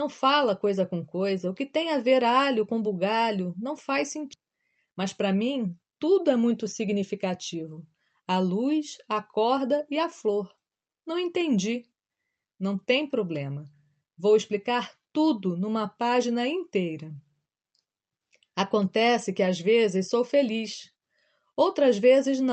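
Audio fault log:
4.33–4.35 s, skip ahead: roughly 0.7 s of audio was dropped while later audio was already waiting, so playback leaps forward right after "com bugalho não faz" with no gap filled, and the speech on either side is joined almost directly.
4.43–7.71 s, jitter buffer speed-up: with the buffer holding more audio than its target, the receiver repeatedly cut short pieces of one or a few pitch periods, about a fifth of a second in total, so speech runs at 107% speed at unchanged pitch and sounds hurried.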